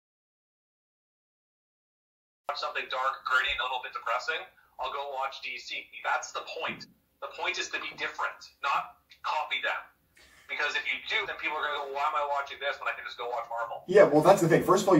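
From the start until 2.49 s there is an audio dropout to silence. It is silent, with no room tone. The input was likely lost while recording continued.

Compressed frames are skipped at 3.60, 6.81, 11.22 and 14.47 s. Each time the sound jumps ahead by roughly 50 to 150 ms, which fits frames of about 46 ms.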